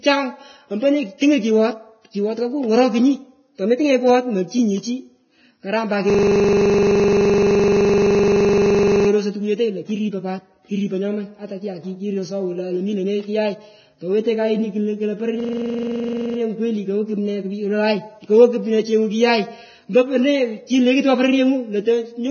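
The whole clip has a dull, grainy top end with nothing above about 6.6 kHz, and the treble dissolves into hiss. That's heavy Vorbis compression damage, likely from a low-bitrate encode around 16 kbps, where coarse quantisation turns fine detail into noise.

Right after "karam pat", from 6.10 to 9.09 s, there's a system hang loop. One 42.67 ms scrap repeats about 70 times, stuttering at 23.4 Hz, which fits a stalled 2048-sample buffer. It happens again from 15.40 to 16.38 s, about 23 repeats, with nothing apparently lost.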